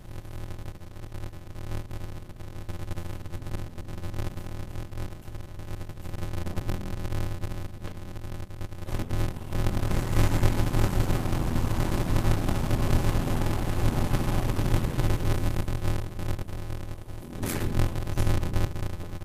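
Throughout the clip there is a block size mismatch (padded): each block arriving short of a 512-sample read is zero-filled, inserting a gap every block. This produces a steady buzz at about 86.1 Hz, and the sound runs at 0.625 speed with pitch essentially unchanged.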